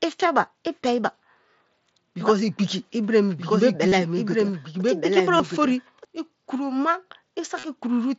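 A speech recording carried over a wideband Bluetooth headset link, with the mSBC codec holding the band to about 8 kHz and adding a faint graininess on louder passages. From 2.21 s to 6.05 s a doubled audio track is audible: a second full-band copy of the same speech runs roughly a second and a half behind, about 5 dB below the original, with no reverberant tail or room colouring. It cuts in and out abruptly at those boundaries. The likely cause is the signal being picked up again through a slower path, or an edit leaving two misaligned copies. Concealed Bluetooth headset packet loss appears at 3.88 s (37.5 ms), 5.37 s (22.5 ms) and 7.59 s (37.5 ms). In each gap the receiver filled the missing audio by repeating the closest-matching fragment of the preceding waveform. This leaves a short buzzy, tonal patch at steady level and a slight warble as real audio resumes. The durations fit runs of roughly three to five lost headset frames.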